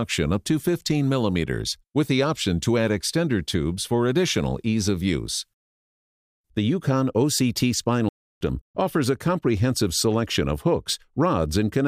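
At 8.09 s the sound cuts to silence for about 0.32 s, then resumes at 8.41 s. This playback stall likely came from the player running out of data.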